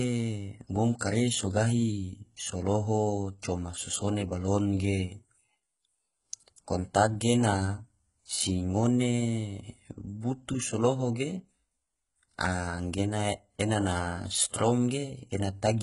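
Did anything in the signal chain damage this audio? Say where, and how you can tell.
Yes. HE-AAC compression runs throughout the speech, most likely at the codec stage: heavy damage, treble gritty and metallic, s sounds lispy, nothing above 11.1 kHz. Upper bands are rebuilt from copied lower ones, so harmonics misalign; the damage fits a very low bitrate, around 12 kbps.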